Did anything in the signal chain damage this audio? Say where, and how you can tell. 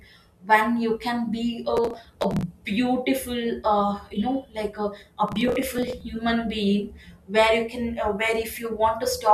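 Yes: processor overload crackle at the driver buffer, 1.77–2.43 s and 5.28–6.01 s. Dozens of tiny buffers are skipped, giving gritty bursts rather than one clean dropout.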